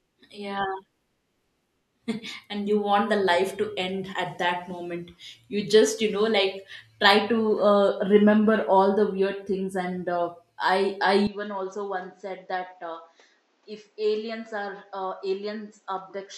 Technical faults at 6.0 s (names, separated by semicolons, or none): none